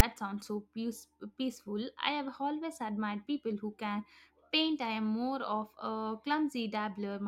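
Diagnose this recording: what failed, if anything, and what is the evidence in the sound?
A hard-edged click of raspy static sits at the very start, at 0.00 s, lasting only about 6 ms before the speech begins, and it is lopsided, pushed to one side of zero rather than centred. This is file tags played as audio, a storage and file-parsing fault: the reader treated a block of text metadata at the head of the file as sample data. Character bytes cluster in a narrow positive range, hence the offset rasp.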